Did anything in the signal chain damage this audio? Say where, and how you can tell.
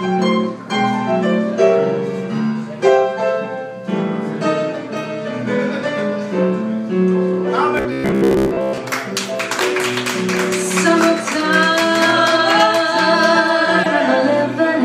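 Yes. From 7.77 to 8.79 s the sound turns into a rigid, metallic robotic buzz at 66.7 Hz. The likely cause is a starved driver or buffer stage repeating short buffers: a 15 ms stretch replayed in place of most of the real audio. On a spectrogram this shows as evenly spaced harmonics at 66.7 Hz. On the waveform it shows as identical blocks recurring every 15 ms.

At 13.83 to 13.86 s there is a brief glitch from a corrupt frame decoded at the codec stage. A single damaged compressed frame was played anyway, so its energy landed at the wrong frequencies and peaked at about -5 dBFS. It looks like a sharp spike on the waveform and a narrow, out-of-place patch on the spectrogram.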